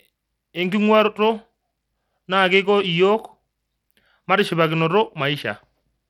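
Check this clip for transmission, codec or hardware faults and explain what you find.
One codec fault runs through the whole clip. The speech sounds gritty and thin, with treble that flickers and drops away and a rough, aliased haze riding on it. This is likely Bluetooth SBC compression at a low bit pool, consistent with roughly 96 kbps, where the weak upper sub-bands get almost no bits and the rest are coarsely quantised.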